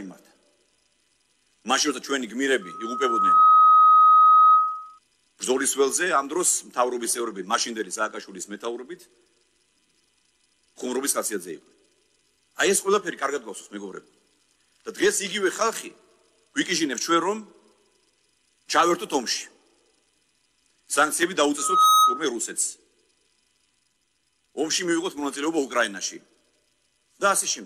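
At 2.61 s a loudspeaker feedback squeal begins. A microphone is picking up the speaker it drives, and around 1.3 kHz the loop gain passes one, so that tone feeds itself and swells over most of a second to about 10 dB above the programme before cutting off at 4.99 s. It returns at 21.58 s, building faster, in a fraction of a second, and stops at 22.25 s. Unlike steady hum or an interfering whistle, it grows from nothing and then collapses.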